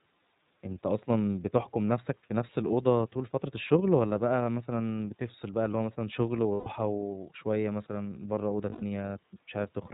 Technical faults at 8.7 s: iLBC codec; lost iLBC frames

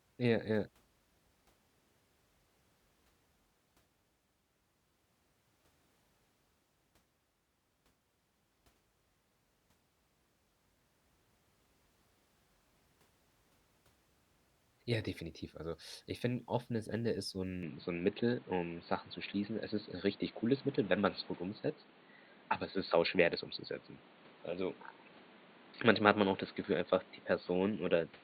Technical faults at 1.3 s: none

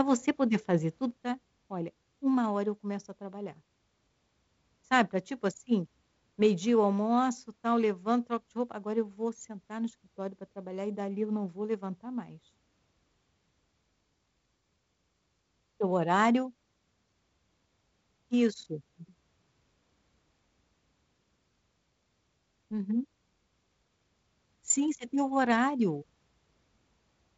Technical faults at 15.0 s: one channel drops out

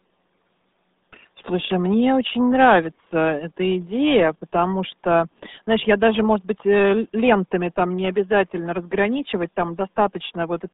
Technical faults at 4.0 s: RealAudio 14.4 codec

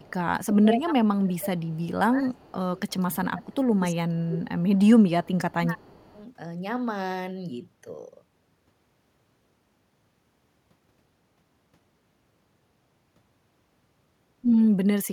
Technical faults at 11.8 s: none

